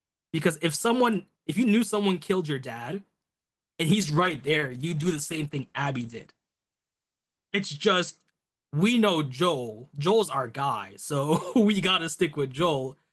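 From 4.0 s to 8.33 s there is a call bitrate drop. The encoder was starved of bits, which fits a fall from 32 kbps to 12 kbps. The speech turns coarse and rough. Everything above 8 kHz vanishes, so it sounds muffled for about 3.6 s.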